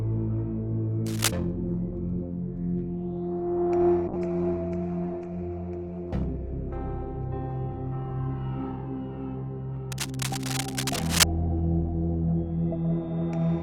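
Cable scratch noise first appears from 1.06 to 1.31 s and returns, longer, from 9.92 to 11.24 s. Both times, dense, uneven bursts of scratching and rustling sit over the sound at roughly the same loudness as the sound itself. The likely cause is a worn cable, connector or control being moved, so that its contact resistance jumps about rapidly and injects crackling noise straight into the signal.

A call bitrate drop runs from 4.08 to 8.33 s. The sound loses its top end and turns rough and watery, and it stays at its worst for 4.18 s before clarity returns. The codec was given far fewer bits to work with, which fits a fall from around 64 kbps to about 14 kbps. It coded everything more coarsely and cut the high frequencies until the bitrate recovered.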